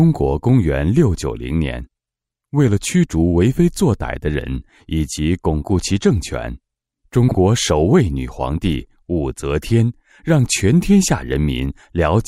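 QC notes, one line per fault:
7.28–7.35 s, frames out of order: a brief garbled flutter where two neighbouring 32 ms chunks play in swapped order, which fits single frames decoded out of sequence. No time is lost overall.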